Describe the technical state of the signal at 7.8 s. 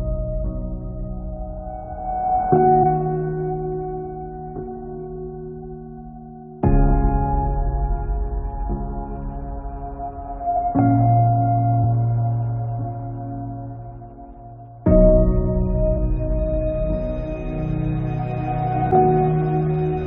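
At 7.8 s the signal is intact, with no audible fault at that point.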